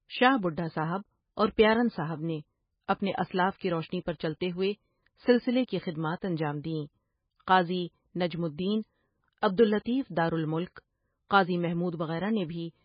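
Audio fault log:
Throughout: MP3 compression, heavy. Nothing comes through above 5 kHz, so the speech sounds dull and boxed-in, with a watery, swirly shimmer where weak detail flickers in and out. That points to a starved encoder, likely running at around 16 kbps, cutting treble and dropping quiet frequency lines.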